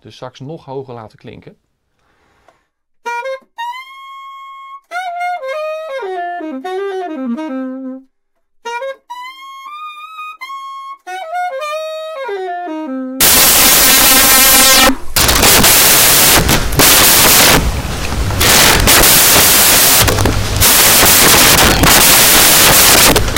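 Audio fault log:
13.21 to 23.37 s, samples built from the wrong bytes: from about 13.2 s to the end, the audio turns into loud broadband noise. The reader is assembling each sample from the wrong bytes, whether from being a byte out of step, swapping the byte order or assuming the wrong alignment. That hands the jittery low-order bits the job of the big part of each value, so what was a smooth waveform comes out as noise.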